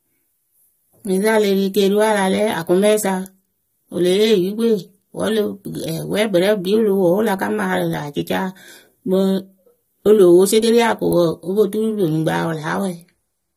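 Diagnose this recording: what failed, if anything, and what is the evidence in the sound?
The codec stage is where this speech went wrong, and the damage runs the whole way through. The top end stops dead at about 15.6 kHz, and the voice sounds dull and smeared, with a fizzy, warbly edge on sibilants and held sounds. That's likely AAC compression, AAC-LC at a low rate, which fits something near 32 kbps. Starved of bits, the encoder drops the highs and coarsely quantises what's left, so the detail turns to mush.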